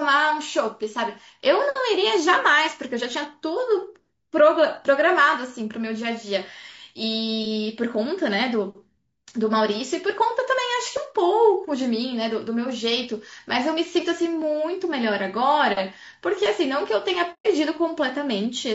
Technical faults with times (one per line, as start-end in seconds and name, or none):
0.00-18.75 low-delay AAC compression
17.33-17.46 AAC frame loss with muting